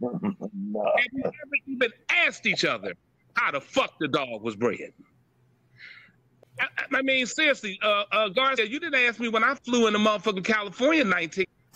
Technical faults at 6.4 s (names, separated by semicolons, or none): damaged data in a compressed stream